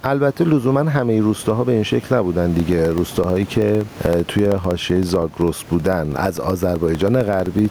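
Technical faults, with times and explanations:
Throughout: gain pumping. The gain swings by about 10 dB, squashing loud and soft parts together. It likely comes from gain set far too high with a fast limiter clamping down. Unlike steady room noise, it breathes with the speech.
2.6 to 7.65 s: periodic USB or driver dropouts. Every 64 ms, about 1 ms of audio drops to silence, producing a regular ticking heard over the speech. The fixed spacing distinguishes it from random clicks or crackle and points to a recurring task blocking the bus or driver.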